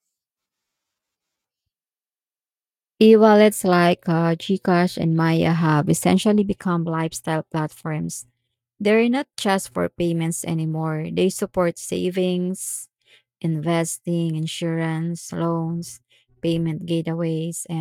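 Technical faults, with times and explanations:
No technical faults are audible in this recording.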